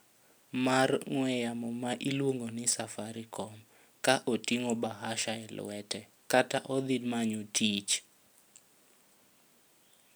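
A block size mismatch, truncated, runs through the whole speech clip. One stage writes longer blocks than the next reads, so each block's tail is dropped. The cut repeats about every 10 ms, giving a steady 100 Hz buzz. The pace and pitch stay essentially normal.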